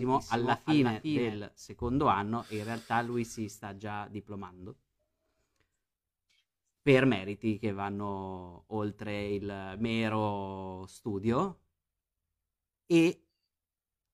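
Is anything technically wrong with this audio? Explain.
Yes. A doubled audio track is present from the very start until 1.48 s, just before "secondo anno e in". A second, dry copy trails roughly 400 ms behind, about 5 dB quieter. It is likely captured again by a slower path. The copy ends abruptly.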